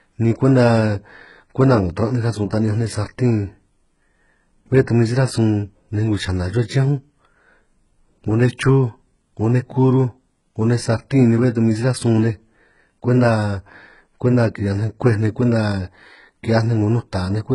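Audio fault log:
Throughout, HE-AAC compression: the treble of this speech was likely rebuilt from copied lower bands at a very low bitrate, around 12 kbps. Nothing reaches above 11.1 kHz, and the synthetic top end misaligns with real harmonics, so s sounds come out heavily gritty, metallic or lispy.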